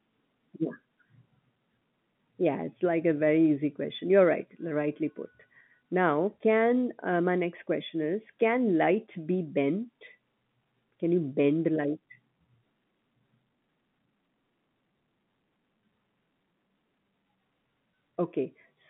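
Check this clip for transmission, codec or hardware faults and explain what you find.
No transmission, codec or hardware faults show up in this clip.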